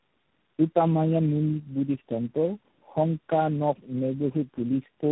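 Right from the start, this speech shows tandem speech coding: it sounds like it passed through about four low-rate speech codecs in a row, each re-encoding the previous one's damage. So it's rough, muffled and warbly, with nothing above 3.8 kHz.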